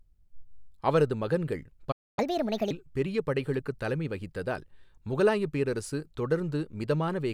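At 1.91 s the speech cuts off mid-flow and the output goes fully silent until 2.19 s, a gap of about 258 ms. This playback stall was likely caused by the player running short of data or being blocked. On a waveform it shows as a flat line, and on a spectrogram as a blank vertical band.

From 2.19 to 2.71 s the speech resumes in catch-up at higher speed, running 1.5 times faster and pitched roughly seven semitones up as the player resamples its backlog. On a spectrogram the harmonics sit visibly higher and more widely spaced during this stretch.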